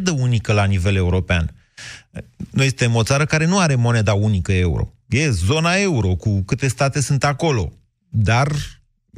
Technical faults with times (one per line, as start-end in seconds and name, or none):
none